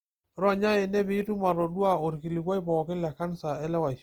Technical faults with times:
0.00-4.03 Opus compression

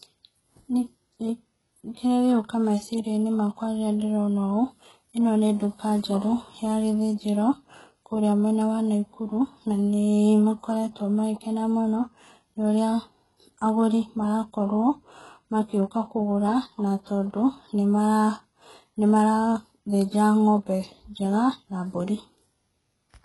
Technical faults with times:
0.00-23.24 HE-AAC compression

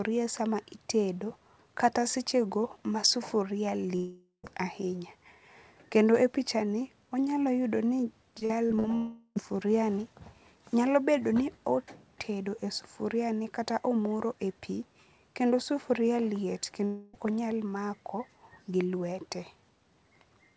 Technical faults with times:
3.96-4.45 long network dropout
8.39-8.86 repeated packet loss (robotic sound)
8.96-9.37 long network dropout
16.85-17.15 long network dropout

